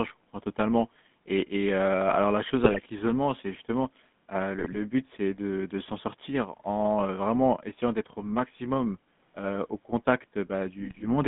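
Throughout, the speech has a buzzy, gravelly roughness confined to roughly 150 Hz to 3.6 kHz, the signature of the GSM full-rate codec's pulse-driven vocal-tract model at 13 kbps. Squawks and gargling burst out from 2.64 to 2.79 s after "heu alors la chose", from 4.58 to 4.79 s after "l'isolement c'est justement heu", and from 10.80 to 11.05 s. These are GSM bit errors, where corrupted filter, pitch or gain values distort the decoded frames.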